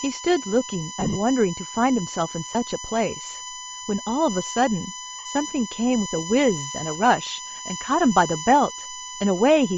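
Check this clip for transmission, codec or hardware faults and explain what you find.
Three faults are audible in this speech: a steady electrical whine, coarse codec damage throughout, and three short dropouts.

USB whine runs the full length of the clip. It is a fixed-pitch tone built on 1 kHz, with its strongest component at 7 kHz. It sits only about 10 dB below the speech. The pitch points to the 1 ms frame timing of a USB bus. Current drawn in those regular bursts has leaked into the audio through a shared power or ground path, producing a tone at the frame rate and its multiples.

Bluetooth LC3 compression also colours the whole clip. The speech has a breathy, grainy edge. The upper frequencies sound hollow, as if replaced by hiss rather than real detail. This is likely the LC3 codec of Bluetooth LE Audio running at a low rate, which fits about 32 kbps with 7.5 ms frames. At such rates the encoder discards much of the high spectrum and fills the gap with shaped noise. 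That substituted noise is the rough texture heard on the voice.

Lost LE Audio frames cause three brief disturbances. From 1.00 to 1.16 s, the sound breaks into a noisy smear in scattered patches totalling 105 ms, the longest lasting roughly 30 ms. There is a tiny blip at 2.53 s, and a 60 ms smear from 5.19 to 5.25 s. When frames fail to arrive, the decoder repeats the last good spectrum with randomised signs. Any clear tone therefore becomes hiss-like mush, fading toward silence if the gap continues.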